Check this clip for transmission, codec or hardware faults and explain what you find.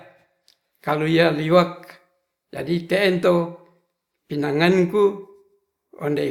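Checking the clip, I find no faults to explain.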